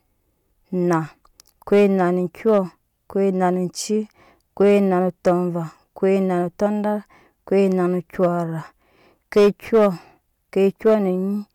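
From start to finish the speech runs into hard clipping. It's driven about 5 dB past what the stage can pass, so a small fraction of the peaks get sliced flat, and those flat tops throw off high harmonics you hear as brief crackle on the loudest moments.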